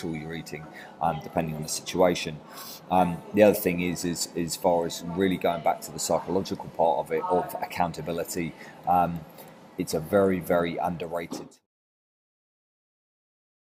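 No technical faults can be heard anywhere in the audio. Near the end, the level fades smoothly out from around 11 s and is gone by 11.67 s, with no click or hard edge.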